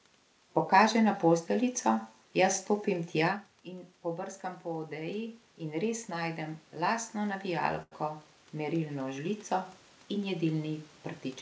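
From 3.65 s to 10.96 s the automatic gain control is rising. Around 3.5 s the talker moves away from the microphone and the level arriving at the input falls by about 13 dB. The gain control reads this as a quiet input and slowly raises its gain by about 10 dB over the next seven seconds. The speech and the room noise swell together, so the background gets steadily louder along with the voice.

At 7.83 s, while the gain is still rising, there is a short stall from a late packet. A packet was not there when it was due and the jitter buffer ran dry. The receiver held the last sound for about 90 ms until the data arrived, then continued from the same point. Nothing is lost, but that sound is held too long, with a faint buzz or dip. After the stall, playback runs about 90 ms later than before. The band stops at 8 kHz, which fits a G.722 call path at 64 kbps.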